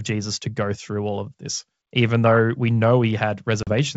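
Packet loss on an ADPCM call strikes at 3.63 s, cutting a hard-edged 40 ms hole of silence where a few packets vanished. The decoder's predictor and step size then lose step with the sender's, so speech resumes slightly distorted before settling by 3.73 s.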